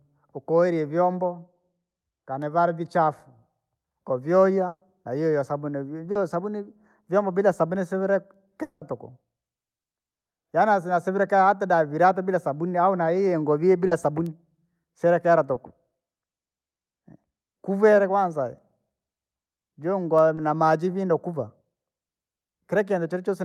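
A speech recording with three kinds of network fault. The burst of packet loss at 4.67–4.83 s replaces about 140 ms of speech with a continuation of the preceding sound. It fades out and leaves about 50 ms of silence before the talker resumes further along. That audible hole after the fading fill separates it from the shorter repairs. Short concealed packet loss occurs at 6.11–6.17 s and 13.87–13.93 s, about 40 ms each, and at 15.53–15.57 s and 20.35–20.39 s, about 20 ms each. Each time a few hundredths of a second went missing and were patched by extending the last sound, then blended back. These are heard as a brief smear or wobble rather than a gap, and a quick consonant can disappear. At 8.63–8.83 s roughly 180 ms of speech is lost. The concealment carries a fading buzz or hiss across the whole stretch without reaching silence, and the speech picks up later with that portion gone. This is likely a long network dropout that ended before the fill ran out. 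The continuous held sound with no trailing silence is what distinguishes it from the earlier burst.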